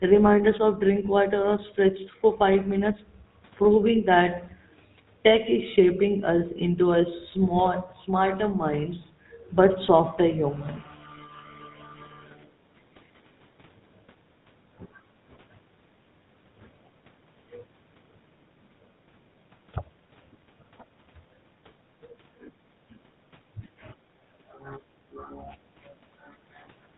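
From start to end, the speech carries the GSM full-rate codec's plainly audible damage, consistent with a 13 kbps stream. The codec models the vocal tract and feeds it a sparse train of regular pulses, so voices take on a buzzy, gravelly roughness, and nothing reaches above 4 kHz. A clean narrowband telephone path is dull but smooth; here the grit riding on voiced sounds marks the older codec.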